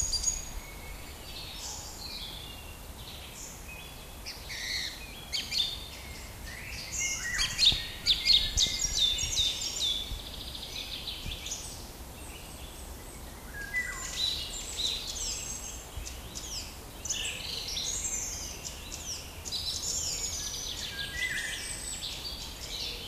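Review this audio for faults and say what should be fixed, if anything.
No faults can be heard anywhere in this recording of sounds. Nothing in it needs to be fixed.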